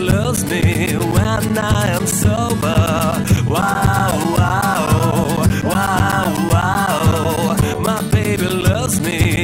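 Regular ticks every 0.125 s from 0.11 s to 9.37 s mark periodic USB or driver dropouts: the driver stalls and roughly 10 ms of audio becomes silence each time.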